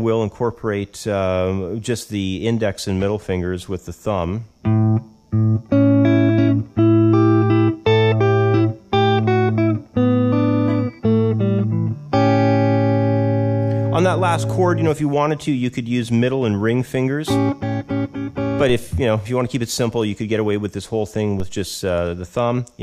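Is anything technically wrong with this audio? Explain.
Yes. There are two DC steps, at 18.69 s and 21.4 s. At each moment the zero line of the waveform jumps suddenly, by about -19 dBFS. The sound rides on the new offset. A high-pass at about 2 Hz then pulls the offset back toward zero, so it decays rather than holding. Each jump is heard as a low thump. The sound itself continues through both events unchanged.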